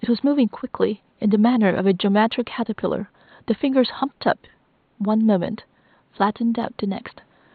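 Speech, with nothing technically wrong to be heard.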